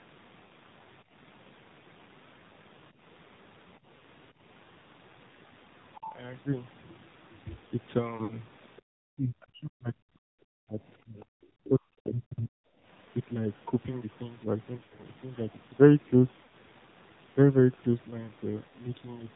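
Right from the start the whole thing is squeezed through the AMR narrowband mobile codec: nothing above 4 kHz, and a buzzy, synthetic edge to the speech that's plainly audible, which fits the 7.4 kbps mode rather than one of the richer ones.

Then come lost AMR speech frames, where the decoder patches each gap by repeating the last pitch and vocal tract settings at falling gain. You hear brief dips or warbles at 0.46 to 0.52 s, 3.98 to 4.02 s and 8.24 to 8.37 s, the last one a touch longer at around 60 ms.

From 8.98 to 10.86 s the talker keeps getting pushed down, in pieces adding up to about a second and a half, at the deepest by about 40 dB. That's likely speech suppressed in double talk, with the echo canceller ducking this side while the far end spoke too.

The lost frames return after that. The worst patch runs from 14.78 to 15.03 s, with gaps scattered over about 200 ms and the longest lasting 80 ms, so the sound smears and thins before it recovers. 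Shorter ones follow at 16.44 to 16.53 s and 18.68 to 18.72 s.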